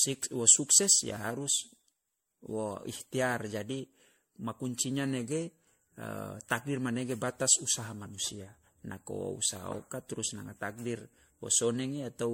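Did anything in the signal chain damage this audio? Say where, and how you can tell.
Yes, at the codec stage, and it runs the whole clip. The speech has the swirly, hollow smear of generation loss: it was most likely re-encoded about seven times as 64 kbit/s MP3. Every pass re-quantised on a shifted frame grid, so the noise and spectral holes piled up. Consonant attacks blur, and nothing survives above 16.5 kHz.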